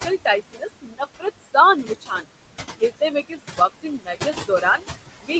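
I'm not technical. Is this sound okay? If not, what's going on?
No, it has two related problems, both from the noise suppressor in the call.

The first is noise suppressor artifacts, and they run through the whole clip. The suppressor tries to remove the steady background noise of the room. It turns that background down a lot between words and lets it rise back under the speech. What's left of the room noise comes and goes. It can flutter or warble, and the voice can sound thin or watery.

The second is speech cut by the noise suppressor. Here the filter mistook parts of the speech for noise and turned them down too. This happens six times: 0.52 to 1.02 s, 1.83 to 2.26 s, 2.77 to 3.13 s, 3.29 to 3.60 s, 3.83 to 4.83 s, and 5.21 to 5.31 s. In those stretches, soft sounds and word endings fade or seem swallowed. The stretch from 3.83 to 4.83 s is the longest one.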